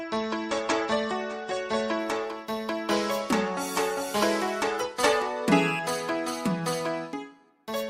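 From 0.0 to 2.0 s the player is on an adaptive stream starting at a low bitrate, which fits roughly 32 kbit/s AAC, until it steps up to around 96 kbit/s. Until then the sound stops at 9.1 kHz and has stronger codec artefacts, then brightens suddenly without a gap.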